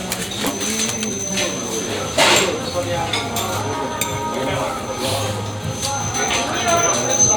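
At about 0.47 s there's a skip ahead: roughly a second of audio was dropped while later material was already queued, so playback jumps straight forward with no gap filled in. The two sides are butted together almost directly, and the sound simply lurches ahead.

Then from 0.97 to 1.33 s comes a jitter buffer speed-up. The buffer was holding more audio than it wanted, so it trimmed short pitch-period slices back to back, about 150 ms in total. The sound runs at roughly 138% speed without any pitch change and comes across as rushed.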